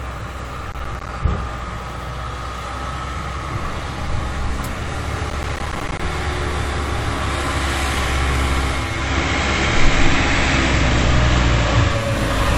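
From 0.72 to 1.09 s, and again from 5.30 to 5.99 s, there's processor overload crackle. The processor couldn't finish its audio buffers in time, and each missed deadline drops out as a short hole of silence with hard edges. Lots of those in a row make a gritty, tearing crackle over the audio. The spacing of the holes fits buffers of around 10 ms, and the second burst runs longer. Both clear up once the load eases.

At 8.71 s the audio goes through digital radio blending to analogue. The receiver lost the digital stream and cross-faded, over 458 ms, to the station's FM broadcast, which stays until 12.24 s. You can hear a bed of hiss roughly 35 dB under the signal. The level moves by about 1 dB at the switch.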